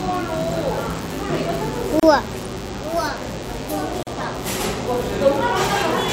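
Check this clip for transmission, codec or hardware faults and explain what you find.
Two faults are present: a cordless-phone buzz throughout and two short silences at joins.

A DECT cordless phone buzz runs the whole clip: a nearby handset or base transmits bursts every 10 ms that the audio circuit rectifies, leaving a thin 100 Hz buzz roughly 20 dB below the sound.

A gap at a join of encoded pieces appears at 2.00–2.03 s (32 ms) and 4.03–4.07 s (40 ms). Two-second segments were encoded separately and joined untrimmed, so encoder delay and padding open brief silences with smeared edges before the sound resumes.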